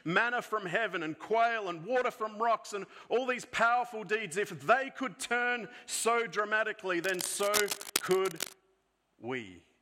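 Cable scratch noise runs from 7.04 to 8.53 s, a dense, uneven scratching and rustling laid over the sound at a level only a little below it. This likely comes from a worn cable, connector or control being moved, its contact resistance fluctuating rapidly.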